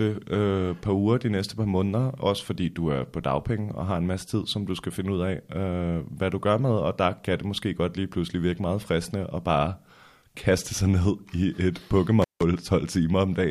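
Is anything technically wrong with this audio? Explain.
Yes. There is an intermittent contact fault near the end of the speech, from 12.22 to 12.42 s. A loose cable or plug briefly lost its connection, leaving the signal path open for about 164 ms before contact returned. While it was open, the speech cut out, leaving only a faint hiss in the gap. The moment the contact broke and the moment it reconnected each produce a short crackle, bracketing the dropout.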